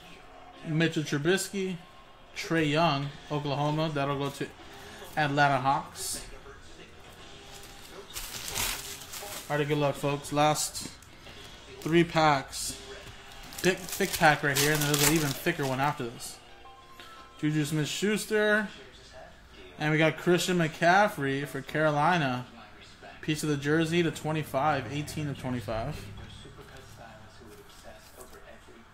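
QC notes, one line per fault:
13.63 to 13.65 s, skip ahead: the audio lurches forward with no audible gap, as if a chunk were cut out and the two ends butted together. Roughly 0.7 s of sound is simply absent. Audio that was already queued got discarded, either lost in transit or dropped when the jitter buffer overflowed, so playback resumed from later material and the listening delay shrank by about the same amount.
15.57 to 16.89 s, jitter buffer speed-up: for just over a second the sound runs quicker, at 108% of normal speed, while the pitch stays put, giving a rushed, compressed feel. The jitter buffer was holding more audio than its target, so the receiver trimmed many tiny slices of a pitch period or so each, removing about a tenth of a second in total to pull the delay back down.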